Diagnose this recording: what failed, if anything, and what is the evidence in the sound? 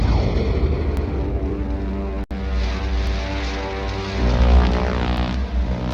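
Overlapping chunks at 0.97–1.07 s, 3.07–3.17 s and 5.17–5.27 s. This is a buffering fault in the processing or streaming stage. The sound arrives in 2-second chunks, and each new chunk begins 100 ms before the previous one ended. That last 100 ms is therefore played a second time at every join. The result is a short stutter or click, repeating on a steady 2-second cadence, that cuts into the sound rather than following anything in it.

Gap at a join of encoded pieces at 2.24–2.31 s. This is a codec-stage splicing fault. The continuous sound drops out for about 68 ms, with its edges smeared by the codec, then resumes from exactly where it left off, with nothing missing. That pattern points to two separately encoded segments joined without trimming. The encoder's start-up delay and the padded final frame were both left in, and together they open this brief silence.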